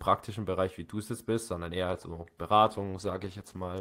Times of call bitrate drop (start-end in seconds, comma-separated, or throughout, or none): 2.64-3.80